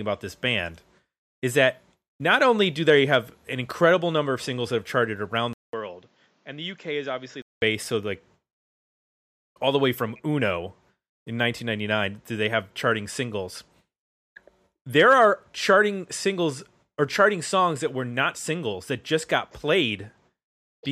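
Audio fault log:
5.53–7.62 s, input switched to a poorer device: after "that have charted around" the sound drops out for about 200 ms, then returns duller and roughly 10 dB quieter, with nothing above 7.5 kHz and faint new background noise about 35 dB below it, until "so like", where it clears. The likely cause is recording moving to a lesser microphone and back. Unlike a plain low-pass or codec bandwidth drop, the gap, level shift and new noise all change together.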